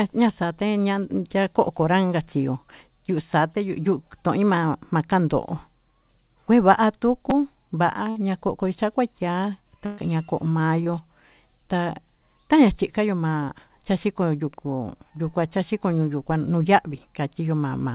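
Speech carried over a call path with nothing above 4 kHz, a band limit that fits G.711 A-law at 64 kbps, has three kinds of fault. A repeated buffer at 7.30 s shows up as a brief click-buzz. The device ran out of fresh audio and replayed the last block two extra times, each block about 5.33 ms long, which fits a 256-sample buffer. The hard joins at each repeat cause the buzz, and roughly 10 ms of real audio is skipped. A burst of packet loss follows at 8.10 to 8.18 s, where about 60 ms of audio never arrived in time. A second burst of packet loss runs from 9.86 to 10.00 s and covers about 120 ms. In both gaps the receiver extended the last received sound and faded it down, so the audio turns into a held buzz or a decaying hiss. When it resumes, the missing stretch is simply gone. A short concealed packet loss at 10.84 to 10.88 s is smaller. About 20 ms failed to reach the decoder, and the receiver patched the hole by continuing the preceding sound before blending back into the real stream. 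The result is a quick smear or wobble, and any brief consonant in that window can drop out.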